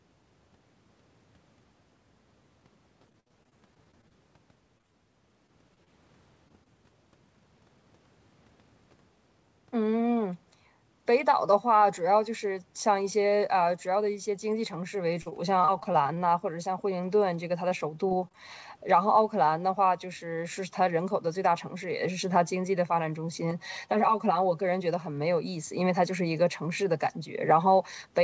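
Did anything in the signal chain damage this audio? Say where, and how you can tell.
Yes. Repeated packet loss (robotic sound) at the network stage, 3.02–6.68 s, 15.22–16.19 s and 17.69–18.35 s: choppy stretches with gaps up to 57 ms, each patched by extended sound. This is unlike single dropouts, which leave one isolated hole.

Jitter buffer speed-up at 8.55–9.17 s: the sound runs about 5% faster at unchanged pitch as about 40 ms of pitch periods are trimmed. A resampling error would shift pitch too.

Channel delay (comb filtering) at 23.51–24.66 s: a roughly 5 ms inter-channel lag, summed to mono, carves fixed notches from near 100 Hz upward, giving a hollow, phasey sound. A flanger's notches would sweep instead.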